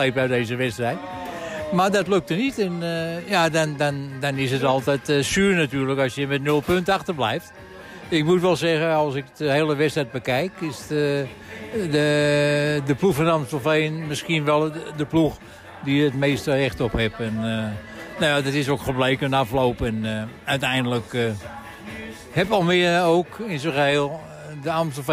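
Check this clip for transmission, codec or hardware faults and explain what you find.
No faults turn up anywhere in this clip.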